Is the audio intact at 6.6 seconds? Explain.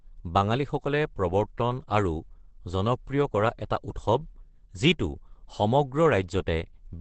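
No, at 6.6 seconds the speech is muffled and hoarse with nothing above 8.6 kHz, as it is throughout the clip. That points to likely Opus compression at a very low rate in its SILK speech mode, which fits roughly 12 kbps. It sounds hoarse rather than swirly, unlike MP3.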